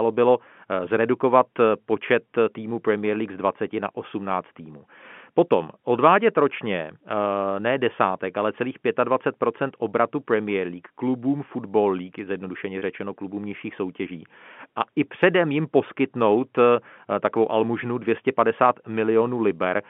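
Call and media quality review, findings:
Packet loss with pitch repetition, 12.79 to 12.82 s. Symptom: about 30 ms of speech briefly held on one slightly buzzy pitch, with no dropout to silence. Component: receiver-side loss concealment. Mechanism: missing audio, consistent with three 10 ms packets, bridged by looping the last pitch period. Spectrogram: a short, frozen, perfectly flat harmonic stack. Waveform: repeated cycles fading in level. The narrowband G.711 line, 150 Hz to 3.4 kHz, carries the audio on either side.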